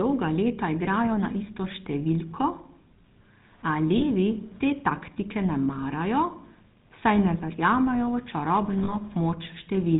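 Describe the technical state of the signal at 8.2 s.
At 8.2 s you're hearing GSM full-rate codec damage, and it's been there the whole way through, not just at that moment. The codec rebuilds the speech from a vocal-tract model fed by a sparse pulse train, so the voice comes out buzzy and gravelly, with nothing above 4 kHz left. The roughness is plainly audible and fits the old 13 kbps GSM rate.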